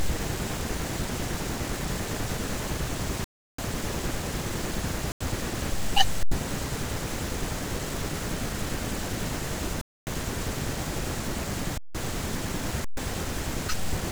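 Underruns with held sample stall the speech at 3.24, 5.12, 6.23, 9.81, 11.78 and 12.85 s, for 0.09 to 0.34 s. The output holds its last value, so the sound flatlines with little or no click. Unlike a dropout to silence, nothing is lost, and speech resumes softly where it paused.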